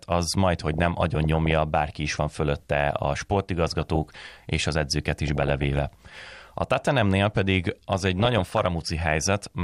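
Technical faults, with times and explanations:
0.54–1.53 s, 3.66–4.26 s, 5.28–5.95 s and 8.01–8.67 s: DAB burbling over the speech before "bárki is van fölötte", between "is van fölötte a" and "és az edzőket", after "és az edzőket", and near the end. Weak reception lets bit errors, on the order of a few tenths of a percent, slip past error correction into the MP2 data. Corrupted samples put short blips of noise in single sub-bands, and corrupted scale factors make sub-bands jump in level for up to a frame.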